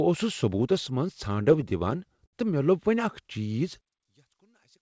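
From 1.32 to 2.35 s the speech shows repeated stalls (stutter): eleven brief holds, the longest 70 ms and about 169 ms in total, where late packets emptied the jitter buffer and the last sound was stretched. Nothing drops out, but the speech drags and hiccups.

From 3.81 s to the end, the speech falls by about 35 dB to a faint copy. The likely cause is one channel inverted, so the shared centre content cancels in a mono sum. The band-limited call sound, with nothing above 8 kHz, fits the G.722 codec.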